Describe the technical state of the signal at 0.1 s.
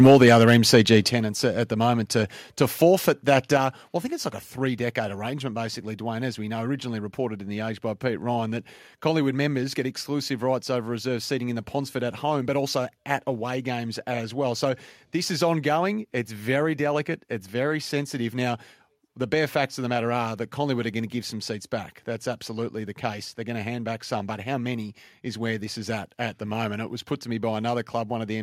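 At 0.1 s the signal is in microphone overload, lasting from 0.0 to 0.96 s. The peaks go about 7 dB past the converter's limit, with roughly 2% of samples flattened, most likely from an input gain set too high. The result is a harsh, crackly edge, visible as squared-off waveform tops and broadband smearing on a spectrogram.

Just before, at 0.07 s, comes a microphone volume step-down of about 4 dB, likely the call software reacting to the clipping by lowering input gain. Level drops abruptly, showing as a sudden step in waveform envelope and a uniformly dimmer spectrogram.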